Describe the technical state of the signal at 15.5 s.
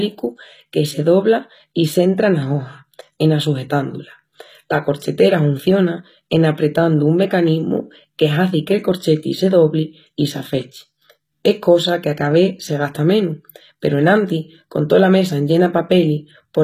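At 15.5 s the speech still carries the HE-AAC compression that runs through the whole clip: the treble is likely rebuilt by spectral band replication at a rate that fits around 20 kbps, so s sounds come out gritty and lispy, and nothing sounds above 14.9 kHz.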